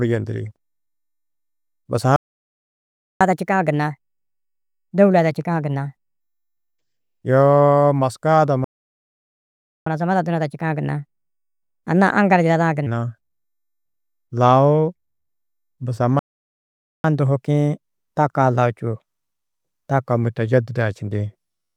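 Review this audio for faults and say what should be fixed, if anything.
Playback stalls occur at 2.16 to 3.21 s, 8.64 to 9.86 s and 16.19 to 17.04 s, lasting about 1.04 s, 1.22 s and 0.85 s. Each time the speech halts mid-flow into silence and then resumes where it left off. The likely cause is a player starved of data or blocked while its buffer refilled. Unlike a dropout, where a piece of the signal is simply missing, nothing is lost here. The sound pauses and continues intact.

Catch-up at higher speed follows each stall. From 3.21 to 6.21 s and from 9.86 to 12.86 s the speech runs at 1.25 times normal speed and sounds about 4 semitones higher. From 17.04 to 20.04 s it runs at 1.1 times speed, about 1.5 semitones higher. After each stretch it drops back to normal. Pitch rises with speed because the backlog is being resampled to recover the lost time. A pitch-preserving time-stretch would speed up the speech without that chipmunk-like shift.

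To prevent both, give the player a deeper buffer or a dedicated unblocked audio thread, and recover from any remaining delay by skipping ahead or using pitch-preserving time-stretch rather than resampling.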